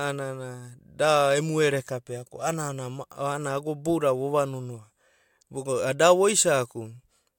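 No technical faults can be heard anywhere in the speech. Nothing in the recording calls for comment.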